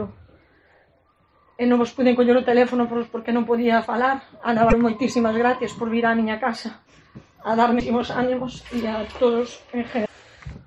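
Damaged data in the compressed stream makes the decoder lose frame sync, producing brief glitches at 4.67–4.73 s, 7.77–7.82 s and 10.02–10.09 s.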